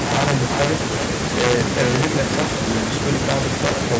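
A gain stage in the signal path runs about 2 dB past its integer limit throughout, and instead of saturating it wraps. Integer overflow means the few peaks that cross the ceiling, only a small fraction of samples, jump to the opposite extreme of the range. Those wrapped samples turn the loudest moments of the speech into sudden, harsh cracks, far more abrupt than ordinary clipping, scattered wherever the level peaks.

Also present from start to finish is echo with no canceller. The far end plays the call through a loudspeaker, its microphone captures that playback, and nothing subtracts it before it is sent back. The returned copy arrives roughly 0.4 s after the original and sits about 6 dB below it. Every phrase is trailed by a quieter, thinner double. The band stops at 8 kHz as the call's microphone processing passes it along.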